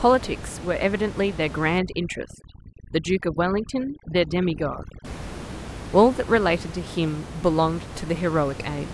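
Speech recorded over a room noise bed about 13 dB down, and from 1.79 to 5.05 s there's overdone noise removal: the reducer clamps bands near its noise estimate, so the background drops to twinkly near-silence and the quieter parts of the voice go with it.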